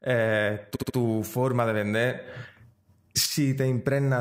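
A speech clip with a repeated-frames fault from 0.75 to 0.95 s, just before "forma de". A block of about 70 ms plays three extra times, so the sound stutters. A stretch of compressed frames was written or sent more than once. This adds 0.21 s.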